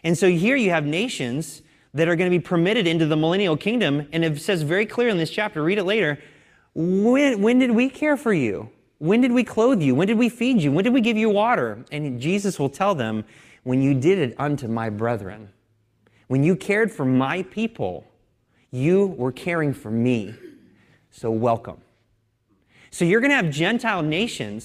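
Nothing in this speech recording reveals any technical fault.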